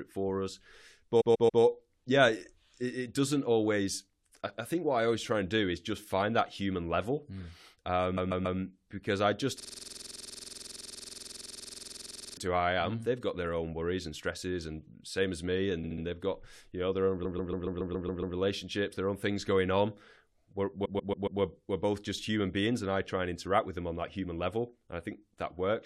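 Repeated frames stutter the speech at 1.20–1.61 s, 8.16–8.58 s (before "because i just"), 15.83–16.03 s, 17.24–18.36 s and 20.84–21.40 s (before "we're both just human"). A 139 ms block, or 70 ms at 15.83 s, replays three to eight times. Between the second and third of these, from 9.60 to 12.37 s, between "because i just" and "to I am", a system hang loop cycles one 46 ms piece about 60 times, fitting a 2048-sample buffer. That gives a steady 21.5 Hz buzz rather than the slower, syllable-length stutter of the frame repeats.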